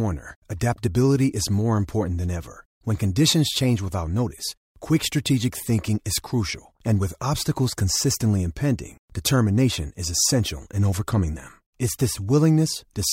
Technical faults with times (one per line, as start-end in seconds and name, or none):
none